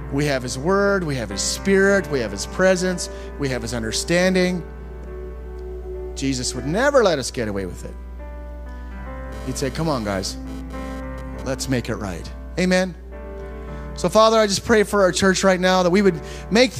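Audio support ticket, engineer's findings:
Hard, raspy buzz at 217 Hz with dense harmonics, 9.32 to 11.42 s, about 19 dB below the signal and unrelated to it. GSM phone buzz: a nearby 2G handset transmitting bursts at 217 Hz during a data transfer, so the interference appears for a stretch rather than persisting. The audio input stage is rectifying the RF pulses into the audio path.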